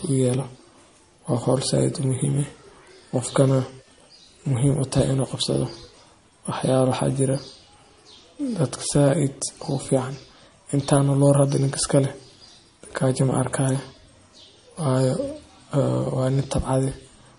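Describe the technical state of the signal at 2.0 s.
At 2.0 s the signal carries damage that runs through the whole recording, likely from MP3 compression: starved of bits, which fits a low bitrate near 40 kbps, the encoder removes everything above 10.6 kHz and drops weak frequency lines, leaving the speech dull, watery and swirly, with chirpy sibilants.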